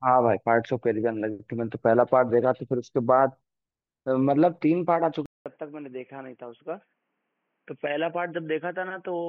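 A speech clip whose sound changes abruptly at 5.26 s. A gap of about 200 ms comes first. From then to the end, the audio is dull and boxy, with nothing above 3.3 kHz. It is also about 10 dB quieter, with a faint new background noise. The likely cause is an input switched to a poorer device, such as a second microphone or a headset in its narrow call mode.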